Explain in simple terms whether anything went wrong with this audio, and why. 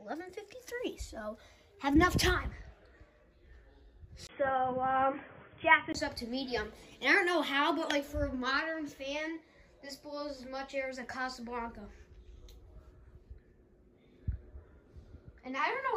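From 4.27 to 5.95 s, the sound suddenly turns dull and boxy. Everything above 3.4 kHz disappears, so the crisp top end is gone. A brief gap of about 20 ms marks the change at 4.27 s. A faint new background noise comes in, but the loudness stays about the same. At 5.95 s the fuller sound returns. This is most likely an input switched to a poorer device, such as a headset in call mode.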